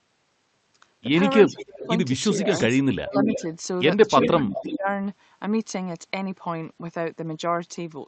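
Speech clip, carried over a call codec whose upper limit is 8 kHz, with speech suppressed in double talk at 1.44–1.89, 2.32–2.50, 2.99–3.37 and 4.18–4.87 s. The talker dips by up to about 20 dB, likely because an echo canceller ducked both sides while the far end spoke. An echo leak overlaps or closely follows this at 1.47–1.88, 2.52–2.77, 3.16–3.43 and 4.19–4.78 s. A copy of the voice returns about 350 ms late, at about 15 dB below the speech at first and about 5 dB below later. It is a discrete delayed repeat, not a room's smooth reverberant tail.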